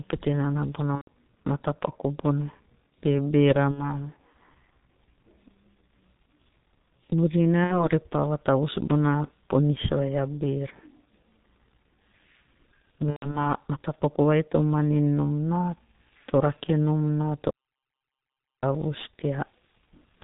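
G.723.1 codec damage runs throughout: heavy coding at about 6.3 kbit/s strips everything above 4 kHz, leaving the speech muffled and hoarse with smeared consonants.

VoIP packet loss concealed by the speech codec appears at 0.96–1.08 s, 3.71–4.00 s, 7.64–7.88 s and 13.10–13.47 s. Each time, the decoder fills the missing audio by extending its last pitch and spectral shape at falling gain. The result is a stretched, fading sound, and the speech stays weak or distorted for a moment after real audio resumes. The first gap covers about 120 ms, which fits four lost 30 ms frames. The second and third are each about 60 ms, consistent with two frames. The last is about 150 ms of loss scattered over 240 ms, with a longest run of 120 ms.

Audio dropout to silence occurs from 17.51 to 18.63 s. The speech cuts off into about 1.12 s of silence with no room tone, then comes back mid-flow. The likely cause is a lost input that the recorder kept filling with silence.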